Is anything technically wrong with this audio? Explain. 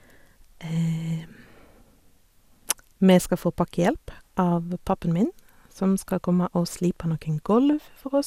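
Yes. Generation loss runs throughout the speech. It sounds swirly, hollow and smeared, with nothing above 17.1 kHz. The likely cause is about seven passes through an MP2 codec, which fits 128 kbit/s.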